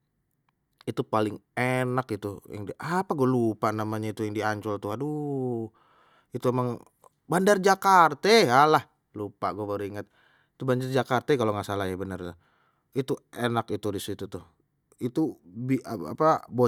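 Nothing here stands out as a technical fault; the speech carries on steadily, with no glitches or dropouts to point to at any moment.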